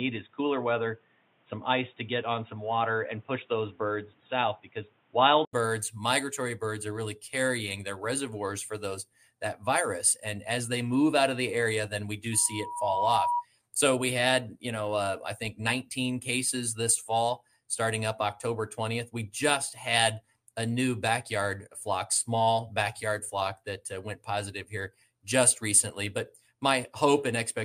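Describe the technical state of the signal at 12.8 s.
A microphone is picking up its own loudspeaker, and the loop gain tops one near 964 Hz: loudspeaker feedback squeal from 12.32 to 13.45 s, swelling over under a second into a howl about 5 dB above the audio.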